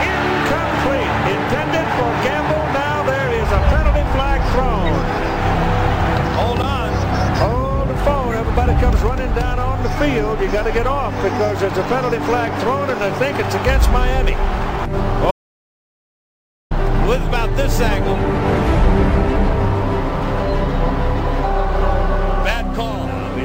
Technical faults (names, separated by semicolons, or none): audio dropout to silence